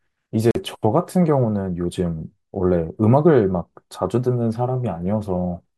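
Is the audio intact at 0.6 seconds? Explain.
Yes, the speech is playing at 0.6 s, but only about 40 ms after a hole. From 0.51 to 0.56 s the sound drops to silence with abrupt edges or a fade of a few milliseconds, and then it picks up further along as if it had kept playing. That is a Bluetooth dropout. It was likely caused by audio packets that reached the headphones too late and were discarded. The roughly 42 ms gap fits about three lost packets.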